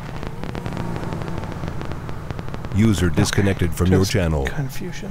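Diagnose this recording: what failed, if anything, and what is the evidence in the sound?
A train of clicks runs from 0.09 s to 3.65 s. Some forty similar pulses arrive unevenly, about 12 per second, roughly 10 dB above the sound, ticking through pauses too. The stage is likely analogue wiring, with nearby equipment injecting each pulse.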